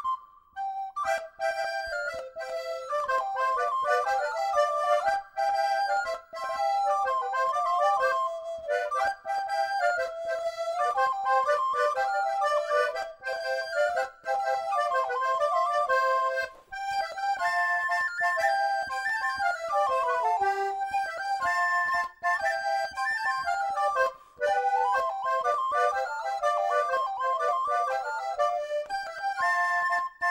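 Nothing here goes wrong at any point, so there's no fault to point to anywhere along the way.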